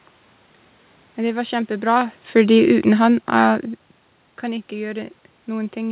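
Automatic gain falling from 1.81 to 3.67 s in this speech: the gain control judged the input too loud or its background noise too strong and gradually pulled it down by about 3 dB, so speech and room noise sink together. It's heard through a call path with nothing above 4 kHz, which fits G.711 mu-law at 64 kbps.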